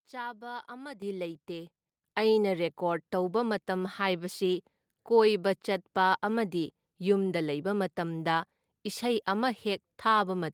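Microphone volume stepped up at 1.02 s and again at 2.04 s: the call software judged the input too quiet and raised the device gain in single jumps, about 10 dB then about 6 dB, so speech and background noise leap louder together at each step.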